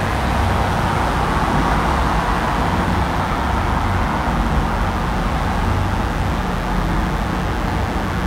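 From start to finish, a mains buzz tied to 60 Hz mains sits under the sounds, roughly 15 dB below them. Sharp switching spikes, of the kind a dimmer, rectifier or unshielded run lets in, arrive twice per cycle, so harmonics stack from 60 Hz well into the kilohertz range. That gives a steady, raspy, edged tone rather than the smooth, low, near-sinusoidal drone of plain hum, which lacks those upper harmonics.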